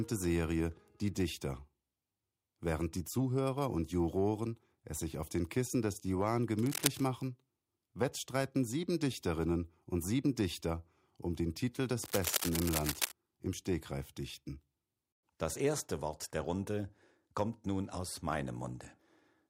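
At 6.58 s a burst of scratchy, rustling noise cuts across the sound for just under half a second, ending at 7.03 s, and a longer one follows from 12.04 to 13.12 s. Both are cable scratch noise, sitting only a few decibels below the sound itself. The likely cause is a worn cable or connector being moved so its contact flickers. On a spectrogram each appears as a dense, ragged broadband smear, and the waveform shows jagged, irregular spikes.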